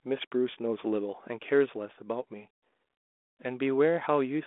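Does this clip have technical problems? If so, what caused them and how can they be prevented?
No, nothing stood out on listening to this speech clip, so there is nothing here that needs preventing.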